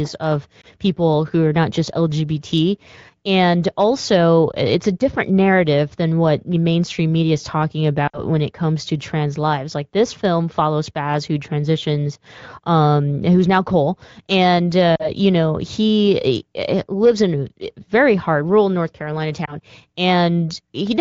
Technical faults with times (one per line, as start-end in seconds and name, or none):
0.61-0.66 lost AMR speech frames
4.51-4.55 lost AMR speech frames
8.07-8.21 lost AMR speech frames
14.96-15.10 lost AMR speech frames
19.45-19.55 lost AMR speech frames